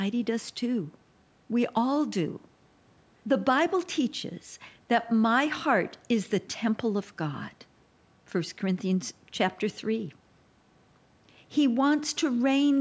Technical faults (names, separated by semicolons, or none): none